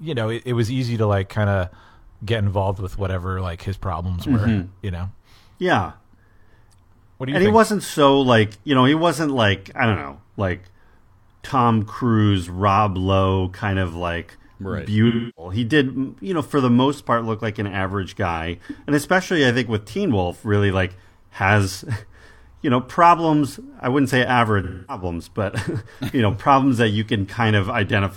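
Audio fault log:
15.07–15.52 s and 24.63–25.03 s: AAC frame loss with concealment. Each time, about 0.3 s and then 0.26 s of coded audio goes missing, which fits a run of seven and then six AAC frames. The decoder papers over each gap by reusing the last good spectrum with its phases scrambled, so the speech turns smeared and noisy. On a spectrogram, the harmonic detail freezes into a static, grainy band. On the waveform, the envelope stays filled in rather than cutting off sharply.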